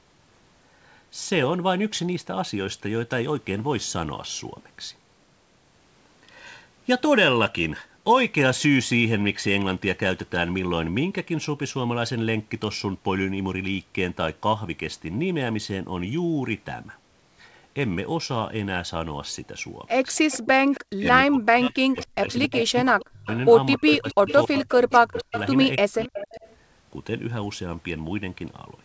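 A speech recording carrying echo leak at 20.16 to 20.8 s, 22.03 to 25.4 s and 26.01 to 26.55 s: a copy of speech returns 274 ms late, likely from a loudspeaker echo the far-end canceller failed to remove. It sits roughly 20 dB down at first, climbs to about 10 dB below the speech in the middle stretch, then about 15 dB below. A spectrogram shows ghost harmonic traces trailing the originals by that fixed gap. Between 20.7 and 26.41 s the talker also suffers speech suppressed in double talk, likely the canceller ducking the near voice while both sides overlap. Around three seconds in total drop out in pieces, dipping as much as roughly 40 dB, which appears as chopped, hollowed-out gaps in the waveform envelope.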